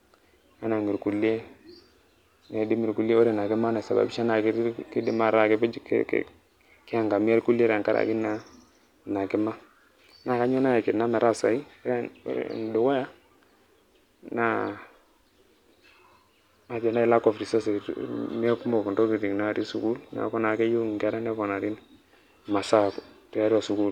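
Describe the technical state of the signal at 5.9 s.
At 5.9 s the speech signal is intact, with no audible dropout, distortion, clipping or other fault at that moment.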